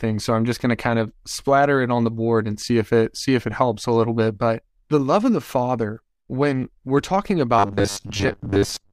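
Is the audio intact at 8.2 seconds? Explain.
No. From 7.59 to 8.92 s, audio likely arrives too seldom, so a 10 ms buffer repeats for about half the time, giving robotic sound from repeated short buffers: a rigid 100 Hz metallic buzz.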